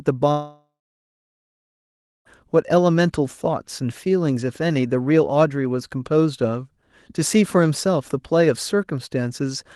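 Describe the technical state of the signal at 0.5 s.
At 0.5 s you're inside a long network dropout that runs from about 0.31 s to 2.27 s. Almost two seconds of audio never arrived, likely because of lost packets, and the receiver smeared the last bit of sound into a fading buzz. That's what you hear at 0.5 s. It dies out within a few tenths of a second, leaving roughly 1.5 s of silence before the audio picks up again, minus the missing stretch.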